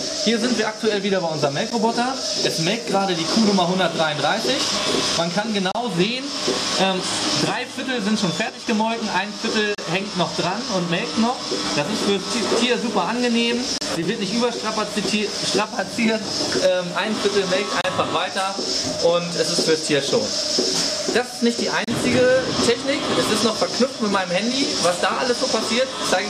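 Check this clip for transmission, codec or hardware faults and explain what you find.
Two faults are present: gaps at the joins of separately encoded pieces, and brief channel dropouts.

Gap at a join of encoded pieces: the audio was encoded in 4-second segments and spliced without trimming each encoder's start delay and end padding. The result is silences that cut into continuous sound at 1.70 s (about 13 ms), then 5.72–5.75, 9.75–9.78, 13.78–13.81, 17.81–17.84 and 21.84–21.88 s (32 ms each). Each has abrupt, slightly smeared edges, and the sound resumes where it stopped.

One channel drops out: at 8.49–8.67 s and 13.95–14.03 s, the level abruptly falls by about 6 dB and then recovers. This is likely caused by one stereo channel briefly going missing, which halves the shared content after mono summing and removes anything carried only on that side.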